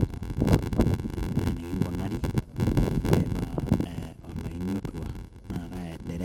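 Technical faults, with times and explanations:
Throughout: block size mismatch (padded). Each block of the speech carries a short gap of silence where shorter writes meet reads that fit 512-sample blocks. These gaps repeat at 86.1 Hz, heard as a steady buzz. The speech runs at 0.861 times normal speed, with its timbre kept.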